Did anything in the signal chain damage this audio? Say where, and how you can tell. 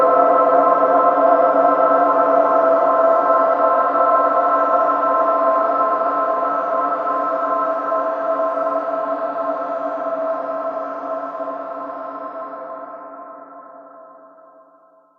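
No, nothing in the signal chain damaged this audio, and no stage along the way left a mark that can be heard.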